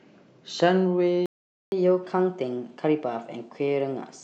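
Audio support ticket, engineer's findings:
Playback stall, 1.26 to 1.72 s: speech cuts to silence for about 0.46 s, then resumes where it stopped. Likely player buffer underrun or blocked audio thread, not a dropout that skips content.

Catch-up at higher speed, 1.72 s to end: player resamples backlog at 1.1x, pitch up about a semitone and a half. Pitch rises with speed, unlike time-stretching.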